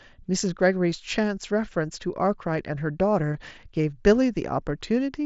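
At 3.34 s a brief buzzy smear replaces about 15 ms of the speech: concealed Bluetooth headset packet loss, where the receiver patched over a couple of lost packets by repeating recent mSBC-coded waveform.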